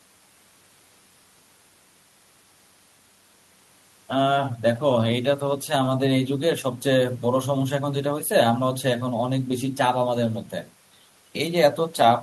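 No faults turn up anywhere in the recording: no dropouts, level jumps, distortion or timing breaks in the signal path.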